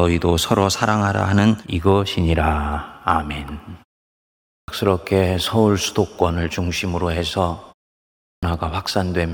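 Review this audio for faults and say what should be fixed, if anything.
Clipped start after a pause at 4.40 to 4.68 s and 8.19 to 8.43 s. After pauses of 0.64 s and 0.54 s, the output goes idle and needs time to wake, so about 280 ms and 240 ms of the returning speech never reach the listener and the speech starts abruptly without its onset. Muted pauses would only silence the background while keeping every syllable; here actual speech is lost. Keep the output device active through silences, or feed it low-level signal instead of true silence, so it never sleeps between phrases.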